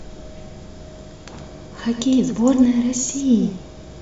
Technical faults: doubled audio track

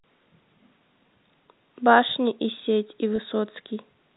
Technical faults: packet loss with pitch repetition

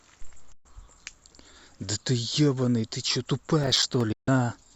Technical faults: digital broadcast dropout; processor overload crackle

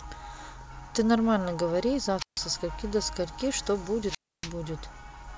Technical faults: wireless microphone squelch dropout

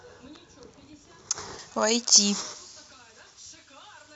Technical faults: pre-emphasis left on

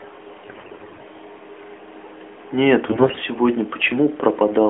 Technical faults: AMR bit errors

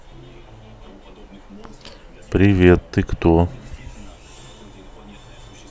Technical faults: none

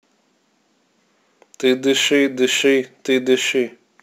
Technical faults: crude rate conversion

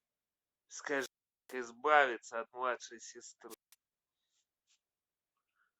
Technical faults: wireless microphone squelch dropout

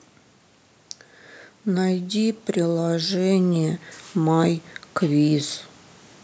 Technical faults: automatic gain rising

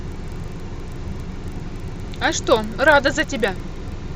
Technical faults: resampler restarted on every block

